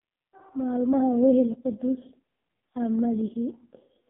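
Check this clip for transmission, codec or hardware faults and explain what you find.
One fault, present from start to finish: the AMR narrowband mobile codec. Throughout, the speech passes only about 150 Hz to 3.5 kHz, with nothing above 3.6 kHz. A spectrogram shows a hard ceiling there. Heavy coding damage leaves the voice buzzy and synthetic, which fits AMR-NB's lowest 4.75 kbps mode, where the vocal-tract model gets very few pulses per 5 ms subframe.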